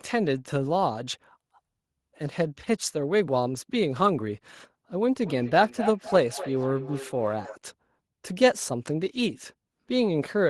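A speech recording in which, from 5.23 to 7.6 s, each stretch of talk returns about a third of a second later, peaking about 10 dB below the direct speech. This is feedback echo between two devices: a second device in the same room replays the call, and the first microphone picks that playback up again, which its own echo canceller cannot remove. Unlike room reverberation, which smears into a continuous tail, these returns arrive as distinct repeats at a fixed spacing.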